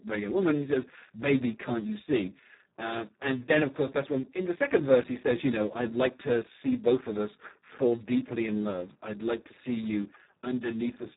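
From start to finish the speech carries heavy Speex codec damage. So few bits are left for the excitation signal that the voice turns hoarse and noisy, which points to a very low rate around 4 kbps. Nothing sounds above 3.8 kHz. Unlike a simple telephone band-limit, which keeps the voice clean within its band, here the hoarse, noisy texture runs through the whole clip.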